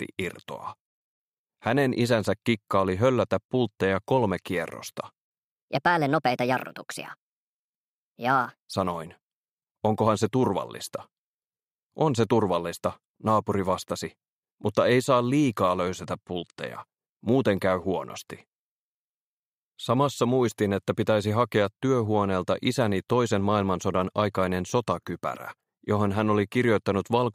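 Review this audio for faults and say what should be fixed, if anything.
Section at the wrong speed, from 5.67 s to 8.73 s: for these three seconds the sound runs 1.33 times too fast, and its pitch jumps up by about five semitones at the same moment, so everything turns high and hurried before dropping back to normal. Because speed and pitch shift together, the cause is likely this stretch being played or resampled against the wrong clock. Fix it by re-rendering that section at its original rate, and prevent it by confirming every segment's sample rate matches the project clock before editing.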